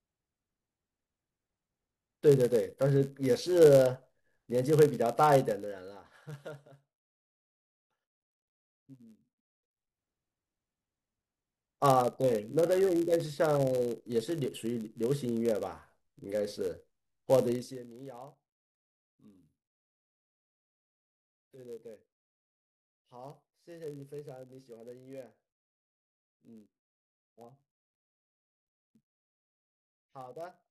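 A steady buzz at 91.5 Hz runs through the whole speech, which plays 0.996 times as fast at normal pitch: a padded block size mismatch, zero-filling each short block.

From 17.52 to 17.87 s a ticking zipper noise rides the fade, as the level drops about 20 dB in unsmoothed 3 dB steps, roughly twenty per second.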